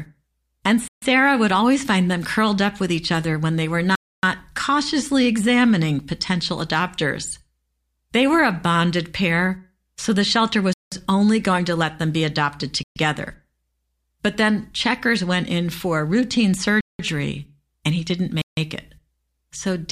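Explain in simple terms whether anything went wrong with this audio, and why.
The speech drops out six times, at 0.88, 3.95, 10.73, 12.83 (after "let them be adopted"), 16.81 (after "went in for routine") and 18.42 s (after "and he didn't"). Each is a block of digital silence lasting 0.13 to 0.28 s, most likely where the program failed to deliver audio in time. Unlike a fade or a muffled patch, the sound snaps to total silence and back.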